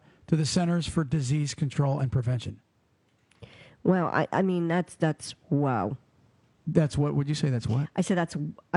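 Nothing in the recording points to a technical fault. The only thing under the speech is the room's own background noise, which sits about 42 dB below it.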